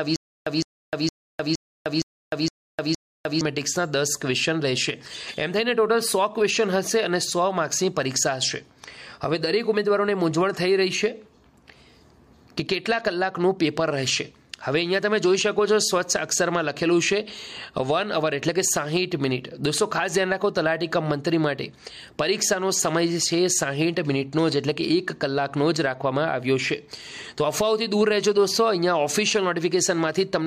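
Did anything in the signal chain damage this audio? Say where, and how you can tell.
Yes: stutter with silent gaps, 0 to 3.41 s. A 159 ms burst recurs every 464 ms with digital silence between, likely a stalled playback buffer replaying its last fragment.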